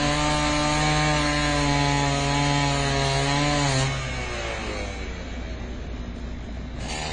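From start to finish the sound is dull and smeared, with plainly audible coding damage and nothing at all above 9.7 kHz. The likely cause is AAC compression, in its AAC-LC form: the encoder discards the top of the spectrum and quantises what remains coarsely against a hearing model, trading detail for size. The hard 9.7 kHz ceiling and the strength of the damage point to a low bitrate of around 24 kbps.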